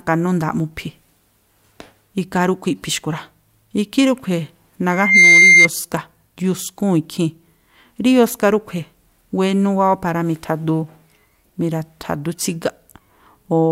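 Loudspeaker feedback squeal appears from 4.91 to 5.68 s: the microphone picks up its own loudspeaker, and at 2.1 kHz the loop gain passes one. That tone swells within about a third of a second into a piercing squeal, roughly 10 dB above the speech.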